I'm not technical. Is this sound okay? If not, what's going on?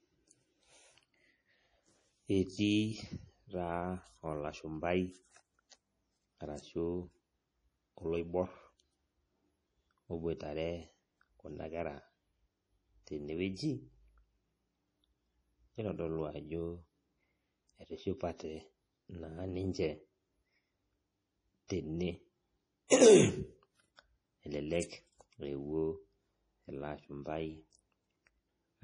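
No. MP3 compression runs through the whole speech clip: the treble stops near 10.5 kHz and the sound turns watery, likely from a strong squeeze to save space. Pre-echo appears from 22.87 to 22.91 s, where compression noise spreads backwards, so a short hiss comes just before a sharp sound, softening it.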